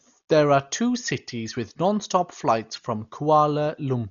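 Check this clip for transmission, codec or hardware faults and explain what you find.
One codec fault runs through the whole clip: heavy damage, likely from Dolby Digital compression at a rate that fits roughly 40 kbps. Nothing is heard above 6.9 kHz, leaving the speech dull. Unfilled frequency lines are replaced with dither noise, so a rough, fluttering hiss clings to tones, unlike the clean dullness of a simple low-pass filter.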